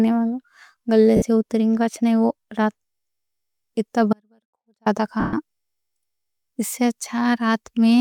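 At 1.16 s, lost LE Audio frames left the LC3 decoder repeating the last spectrum with randomised signs for 60 ms, so the speech briefly turns into a noisy smear. From 4.13 to 4.86 s there is an audio dropout to a faint residue. The signal was likely lost upstream while the path after the break stayed live, so the speech cuts out abruptly and leaves only a faint leak, roughly 40 dB down, for 0.73 s. At 5.20 s, more lost LE Audio frames bring a longer 130 ms concealment. The smeared, noisy sound fades as the decoder winds its substitute down.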